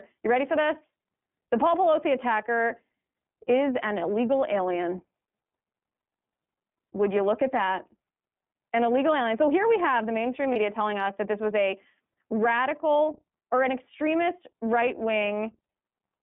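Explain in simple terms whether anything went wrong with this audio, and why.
iLBC codec, throughout the whole clip: the speech was squeezed by a phone-style voice codec, so it sounds thin and slightly rough, with nothing above about 3.5 kHz kept.

Lost iLBC frames, at 10.53 to 10.56 s, between "we have the mainstream" and "telling us that this": one 30 ms packet went missing, so the decoder briefly held a buzzy copy of the last sound before recovering.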